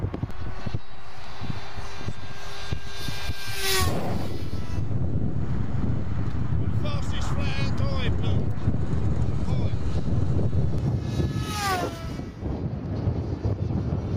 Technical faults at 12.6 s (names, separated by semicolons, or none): none